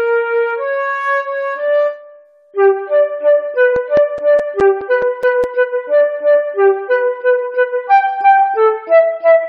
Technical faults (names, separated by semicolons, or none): CD scratch ticks